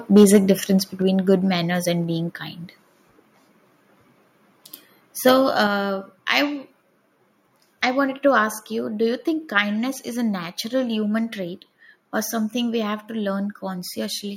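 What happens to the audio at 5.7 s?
At 5.67 s the microphone volume is stepped down: the call software has likely judged the input too hot and cut the device's capture gain in a single move rather than easing it down. The speech and the background beneath it drop together by about 5 dB at that instant and stay at the lower level afterward. Because the change happens before any processing downstream, the whole signal shrinks at once.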